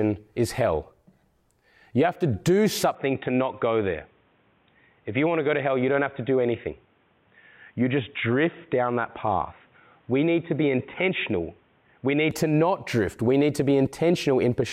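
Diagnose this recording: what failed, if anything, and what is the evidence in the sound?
At the capture stage, from 2.95 s to 12.31 s the speech turns dull, with nothing above 3.8 kHz and new background noise about 40 dB down, switching seamlessly with no gap or level jump. A likely input switched to a poorer device, not a codec bandwidth drop, because the noise floor changes too.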